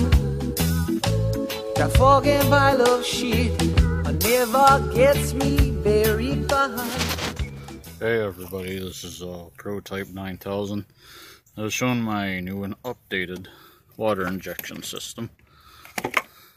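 No faults detected anywhere in the audio.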